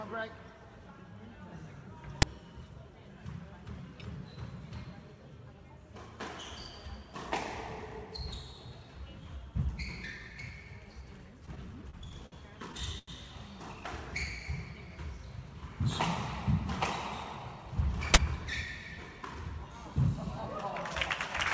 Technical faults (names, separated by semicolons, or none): uninitialised buffer; repeated stalls (stutter)